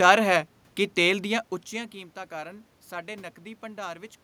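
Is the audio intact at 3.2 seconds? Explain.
Yes, the audio is intact at 3.2 seconds, with no technical fault at that moment beyond the room's own background noise, which belongs to the recording itself.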